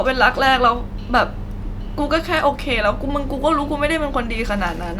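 No technical faults are audible at any point.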